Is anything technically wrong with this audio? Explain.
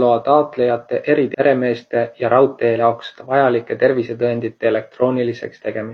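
Yes. The speech has two short bursts of damaged data in a compressed stream, from 1.30 to 1.35 s and from 2.75 to 2.80 s, each about 44 ms. At those points the decoder meets corrupted bytes, misreads the frames and must resynchronise on a later frame header, so a brief chirp, squawk, click or short hole replaces the audio.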